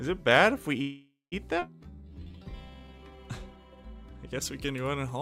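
A call audio freeze runs from 0.81 to 1.34 s: the sound stalls and the last fragment is stretched into a fading buzz or hiss that drops to silence for about 180 ms, then resumes exactly where it stopped. About half a second has been inserted, with nothing lost, most likely because packets were held up in transit and the jitter buffer ran dry. A skip ahead at 1.60 s jumps the audio forward with almost no gap, cutting out roughly 300 ms; that stretch was dropped in transit or by the jitter buffer, so the two sides are spliced nearly directly. A jitter buffer slow-down follows from 1.83 to 3.17 s, where the audio plays at about 81% speed with unchanged pitch and sounds drawn out. The receiver repeated single pitch periods and bits of pauses many times over, adding 258 ms to rebuild its reserve. Pre-emphasis left on affects the audio from 4.42 s to the end at 5.21 s, giving a thin, bright, sibilant tone. 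The treble sits about 11 dB above 1 kHz at 10 kHz, which fits a 50 µs FM pre-emphasis curve whose matching de-emphasis cut was never applied.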